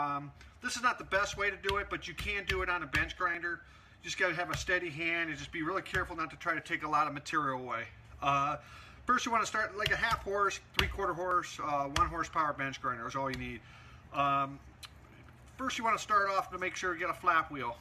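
The audio has three brief skips at 3.35, 7.33 and 11.31 s. Each is a tiny skip where roughly 13 to 16 ms of sound goes missing and the waveform jumps. This is an overlap between stream segments. Two adjacent segments claim overlapping time stamps, so the player trims the shared stretch, removing real audio. The skips fall about 4 s apart, matching 4-second segments.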